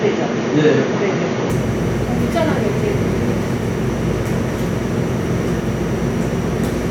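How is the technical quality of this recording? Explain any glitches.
An input switched to a poorer device accounts for the glitch, from 0.0 to 1.5 s at the very start of the recording. For that opening stretch, nothing reaches above 6.8 kHz, so the everyday sounds come across dull and boxy. A faint new background noise sits about 30 dB below them. At 1.5 s the full top end returns with no gap and no real jump in level. The likely cause is the system capturing through a narrower-band microphone or headset profile before changing to the intended input.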